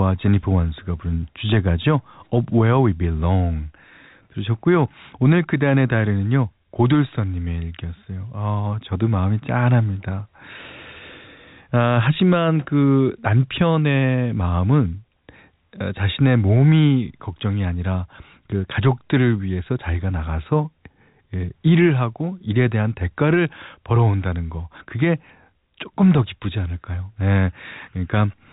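The clip is speech carried over G.711 telephone coding, with nothing above about 3.8 kHz, and nothing is technically wrong with it.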